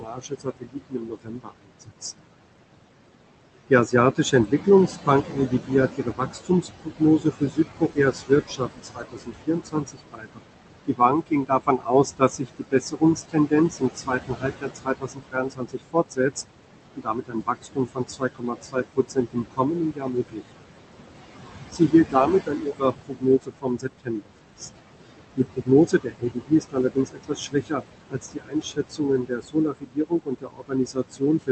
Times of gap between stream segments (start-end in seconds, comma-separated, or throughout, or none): none